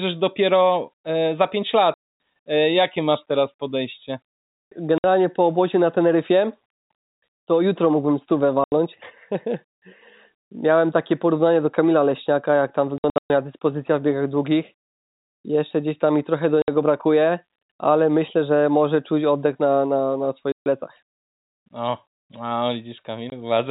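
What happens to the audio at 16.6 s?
The speech drops out abruptly from 16.62 to 16.68 s, a 60 ms hole of dead silence with hard edges. This is packet loss filled with silence: packets of the telephone-band G.711 stream never arrived, and the receiver played silence in their place instead of concealing the gap. A 60 ms gap fits three consecutive 20 ms packets going missing, so the cut is abrupt rather than smoothed over.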